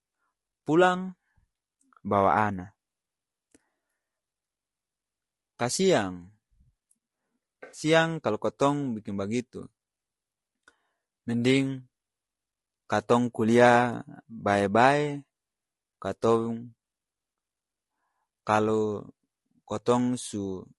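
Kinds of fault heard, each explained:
Low-delay AAC compression: throughout, the speech sounds rough and grainy, with noise between harmonics, likely from short-frame AAC-ELD coding at a low bitrate near 32 kbps.
AAC frame loss with concealment: from 7.63 to 7.81 s, a smeared, noisy patch where the decoder filled in roughly 100 ms of lost frames from the last good spectrum.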